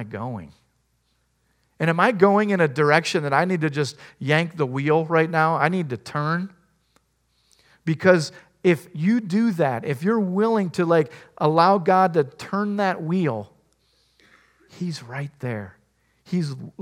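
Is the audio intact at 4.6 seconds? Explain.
Yes, the audio at 4.6 seconds is intact, with no dropout, click, distortion or other fault at that moment.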